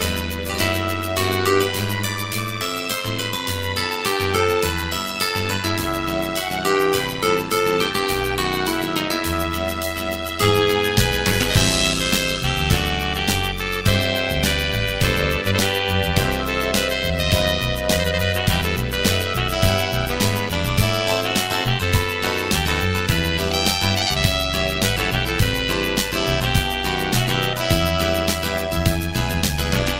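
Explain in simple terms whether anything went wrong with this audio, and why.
A metallic buzz runs through the entire clip, from the first second to the last. The level pulses strongly about a hundred times a second, so the sound takes on a buzzy, robotic tremble. This is overlap-add ripple. The audio was chopped into short, overlapping slices and stitched back together, but the overlaps didn't blend to a steady volume. Each join dips and swells, and that repeating wobble is what you hear.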